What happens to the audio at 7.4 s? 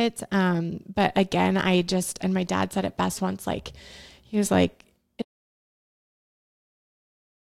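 At 7.4 s there is nothing at all: the speech cut off abruptly at 5.22 s, right after "like he was like", and the clip stays in silence through to its end, with no room tone or hiss underneath. This is an audio dropout to silence. The input signal was likely lost, through a disconnected device, a broken link or an accidental mute, while recording carried on writing silence, so whatever followed was never captured.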